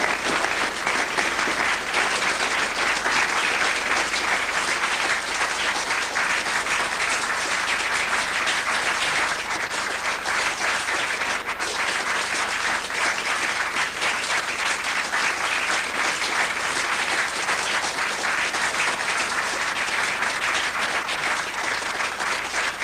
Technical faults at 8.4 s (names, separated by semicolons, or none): none